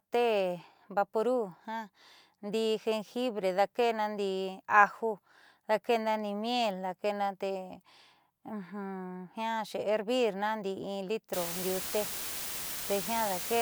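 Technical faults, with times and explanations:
11.33 to 13.62 s, low bit depth with dither: the speech drops to what sounds like about 5 bits, and dither added before the rounding turns the quantization error into a steady, even hiss rather than gritty distortion. That hiss sits almost as loud as the speech itself, right to the end.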